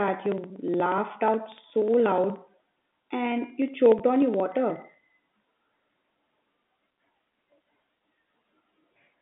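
From 0.08 s to 9.14 s, the speech has periodic USB or driver dropouts. Every 0.06 s, something stalls the audio driver or the USB bus. Each time, roughly 4 ms of signal is skipped, not filled. The two sides of the gap butt together. That leaves a small tick or pop, about 150 of them in all. They march at an even rate, which is why they sound mechanical. They are audible only while speech is present.

At 3.99 s, one packet of about 10 ms is lost. The receiver covers it with packet loss with pitch repetition. It repeats the last pitch period to fill the hole. Because the loss is so short, there is no fade to silence. Instead the sound holds for an instant with a slight buzz, then carries on. It sits inside the telephone band of 150 Hz to 3.5 kHz, which the G.711 coding passes as expected.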